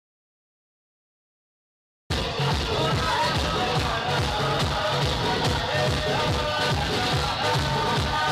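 An audio dropout to silence runs from 0.0 to 2.1 s: plain silence with no room tone, unlike a gate or fade, likely a lost input, before sound abruptly returns.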